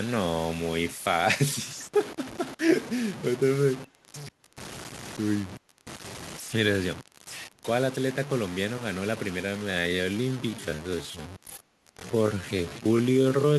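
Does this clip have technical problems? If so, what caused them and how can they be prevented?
Yes. Three faults can be heard.

Grainy distortion runs through the whole clip and changes with the speech, turning harsh on quiet passages while the faintest parts sputter or drop out. The likely cause is low bit depth without dither: the signal was truncated to very few levels, which fits about 5-bit resolution, leaving an error floor only roughly 15 dB below the speech. Keep at least 16 bits through processing and apply dither at the final word-length reduction.

From 3.83 to 4.05 s a very faint, delayed copy of the speech appears, trailing the original by about 0.35 s and sitting far below it in level. This is likely an echo leak, where a far-end loudspeaker's output reached its microphone and the echo canceller failed to remove this short stretch before it was sent back. Use headsets or tune the echo canceller's adaptation and residual suppression on the loudspeaker side.

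From 9.41 s to the end at about 13.6 s, the pace drops abruptly to roughly 0.59 times normal speed while the pitch stays the same. This is likely a time-stretched section, where software lengthened the audio by repeating short pieces to preserve pitch. Avoid stretching speech this far, or use a higher-quality stretching algorithm and edit content instead to fit the length.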